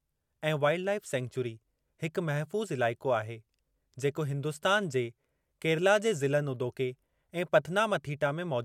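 No technical faults can be heard anywhere in this recording.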